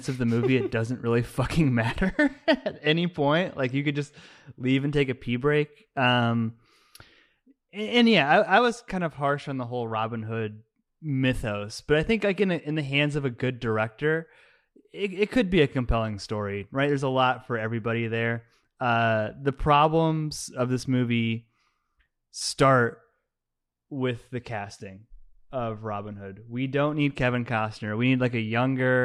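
At 22.40 s a brief smeared, noisy blip interrupts the speech. It is AAC frame loss with concealment: roughly one 10 ms frame went missing, and the decoder patched the gap from the preceding spectrum rather than leaving silence. The light coding damage of the low-delay AAC coding likely comes from AAC-ELD.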